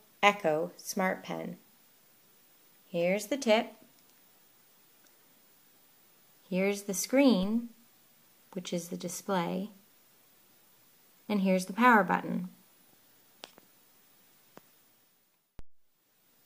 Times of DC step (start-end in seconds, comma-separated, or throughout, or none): 7.43, 15.59